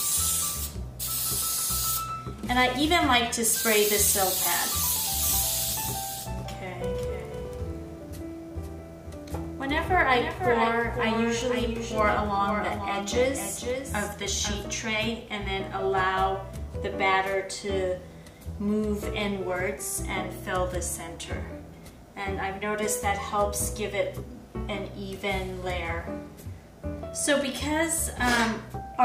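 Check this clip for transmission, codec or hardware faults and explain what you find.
There is one fault, a doubled audio track from 5.23 s to 14.67 s. Throughout that stretch a second full-band copy of the sound trails the original by about half a second at about 5 dB lower level, with no decay or room colour, and it cuts in and out abruptly. The likely cause is the signal being captured again through a slower path, or an edit holding two copies out of step. On a waveform or spectrogram, every event reappears about 0.5 s later as a lower-level duplicate.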